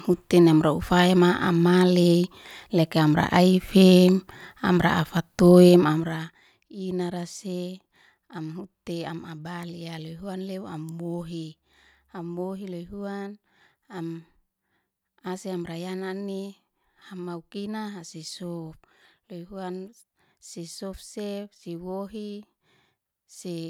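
From 5.65 to 6.48 s there's zipper noise: the level drops about 15 dB in raw 2 dB steps, around fifteen a second, so the speech picks up a fast ticking.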